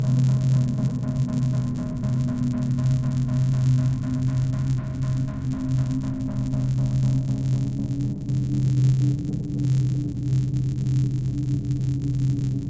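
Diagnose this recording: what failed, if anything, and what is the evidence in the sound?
The fault sits in the sample-rate conversion stage: a resampler restarted on every block. A steady buzz at 100 Hz rides on the sound for the whole clip. It follows the signal and drops away in gaps. That rate matches 10 ms blocks. Each block was converted alone, so its edges lacked real neighbouring samples. Every boundary leaves a small error. The band limit fits a conversion from 44.1 kHz down to 16 kHz.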